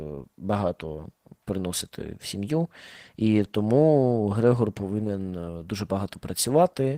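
From start to finish the speech carries Opus voice compression, and the damage is plainly audible. The lower band sounds coarse and hoarse, with a slightly robotic edge, because the linear-prediction layer is coding the excitation sparingly. Above 8 kHz a separate transform layer codes the upper band, which fits a hybrid mode at roughly 16 kbps. That grainy, synthetic roughness sets it apart from a simple low-pass filter, which would only sound dull.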